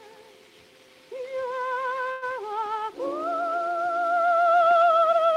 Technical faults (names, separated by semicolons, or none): call audio freeze